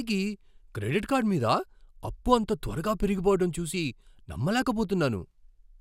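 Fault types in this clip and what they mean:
There are no fault types in the clip to describe.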